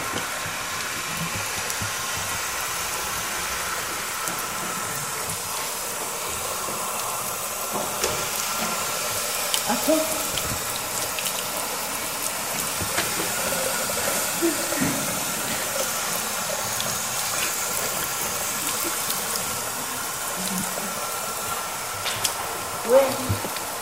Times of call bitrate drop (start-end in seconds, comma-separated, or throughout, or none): none